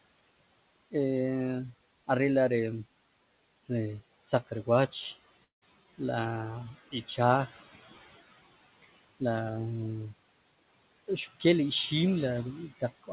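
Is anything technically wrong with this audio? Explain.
Yes. There is a long network dropout from 5.44 to 5.63 s, most likely caused by packets that never reached the receiver. About 180 ms of the original audio is gone. The receiver's concealment extends the last sound for roughly 174 ms as a buzzy tail that fades, then leaves about 140 ms of silence before the audio resumes further on. On a waveform this appears as a decaying smear followed by a flat gap. On a spectrogram, smeared repeating bands fade into an empty column. The narrow band with nothing above 4 kHz fits a G.711 mu-law call codec.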